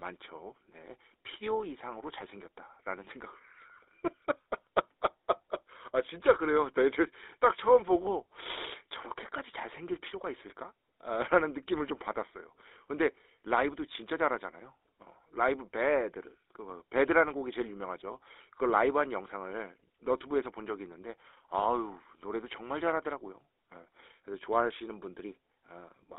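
Throughout, the speech shows plainly audible GSM full-rate codec damage, consistent with a 13 kbps stream. Its sparse pulse excitation gives a buzzy, gravelly roughness, and the spectrogram is confined to 300 Hz to 3.7 kHz.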